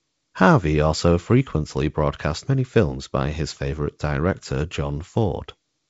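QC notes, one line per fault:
Nothing to flag here: the speech sits comfortably in its G.722 wideband telephone coding at 56 kbit/s, with the top end stopping around 7.7 kHz, just as that path would give it.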